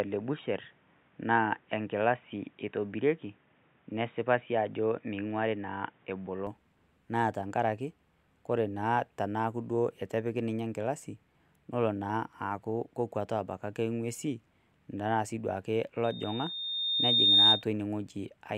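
From the start to 6.47 s the speech sounds dull and boxy, with nothing above 3.8 kHz. It is likely an input switched to a poorer device, and a spectrogram would show energy sharply cut off there with added faint noise.

At 16.04 s, just after "anaa sii duo ake", a loudspeaker feedback squeal at 3.7 kHz builds over about 1.5 s to about 10 dB above the speech, then stops at 17.64 s. On a spectrogram it appears as a brightening horizontal line, and on the waveform as a swelling envelope.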